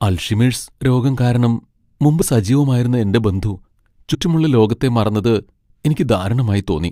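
At 2.21 s, after "അൽഷിമേഴ്സ് രോഗം കാരണം മുമ്പ്", compressed frames are skipped: a few frames, roughly 30 ms of speech, never reach the output, so the sound lurches forward into "സജീവമായിരുന്ന എന്റെ ബന്ധു". The waveform shows a discontinuity at the join. The spectrogram shows a brief vertical mark across the harmonics. The same jump recurs at 4.13 to 4.15 s, just before "ലോകത്തെ മറന്നത്", losing around 50 ms.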